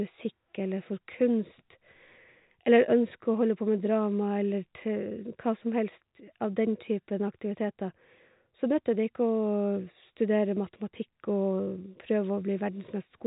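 No technical faults are audible in this speech.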